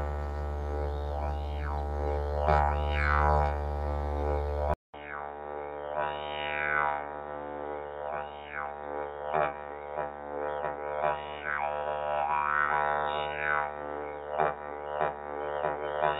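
At 4.74 s the input likely switched to a poorer device; after a 200 ms gap, sound turns boxy and quieter, cut off above 3.8 kHz.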